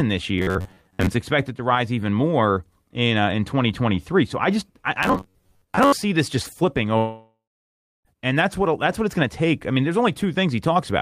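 Robotic sound from repeated short buffers at 0.39–1.09 s, before "expected to rise even," and again at 5.03–6.04 s, between "I just I" and "this just flipping": a rigid metallic buzz near 94 Hz. The likely cause is a roughly 10.7 ms chunk being replayed when audio arrived late, with about half the real audio skipped. A long network dropout runs from 6.97 to 8.08 s, after "this just flipping." About 1.08 s of speech is lost, likely to the network. The gap is filled with a fading continuation of the last sound, then 0.64 s of silence, before the speech resumes at "and that's what that's."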